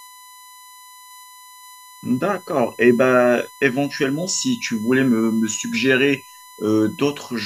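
Throughout the speech runs a steady USB whine at 1 kHz, about 25 dB below the voice: the bus's 1 ms frame rhythm leaking into the audio through power or ground. Unlike mains hum, its fixed pitch sits at 1 kHz, not 50 or 60 Hz.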